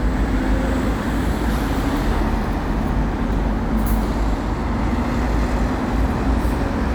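No technical faults are audible.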